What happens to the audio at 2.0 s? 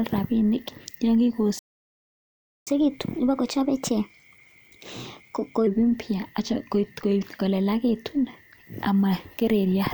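A playback stall runs from 1.59 s to 2.67 s, so at 2.0 s the speech is cut off mid-flow and the output is silent for about 1.08 s. The likely cause is the player running short of incoming data, or its playback thread being held up, leaving nothing to send to the output until it recovers. At 2.67 s the speech resumes abruptly after the gap.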